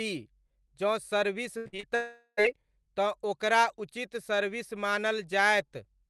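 Repeated packet loss (robotic sound) runs from 1.57 to 1.85 s, right after "जँ सर्विस". Four short holes, the longest 81 ms, are each patched by stretching the preceding sound, so about 180 ms is missing and the passage turns choppy.

A long network dropout follows from 1.95 to 2.39 s, likely a stall in which about 420 ms of audio never arrived. A fading buzz continues the last sound and then gives way to about 50 ms of silence before the audio resumes, without the lost part.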